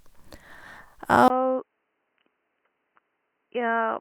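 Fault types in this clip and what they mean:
Input switched to a poorer device: from 1.28 s, after a short gap, speech turns dull, quieter and cut above 3 kHz. Likely another microphone took over.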